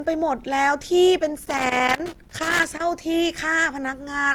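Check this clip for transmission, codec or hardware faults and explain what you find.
Two faults are present in this speech clip.

Throughout, the sound is swirly, hollow and smeared, with blurred attacks. This is likely generation loss from about four Opus passes near 64 kbit/s, more degraded than one encode would leave.

From 1.45 to 2.80 s there is loose connector crackle: a worn contact chops the signal irregularly, giving scratchy bursts rather than the steady smearing of codec damage.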